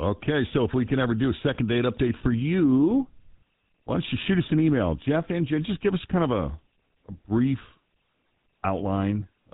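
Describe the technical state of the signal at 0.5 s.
At 0.5 s you're hearing GSM full-rate codec damage, present throughout: pulse-driven vocal-tract modelling, which fits a 13 kbps stream, leaves this speech band-limited below 4 kHz with a clearly buzzy, gravelly roughness.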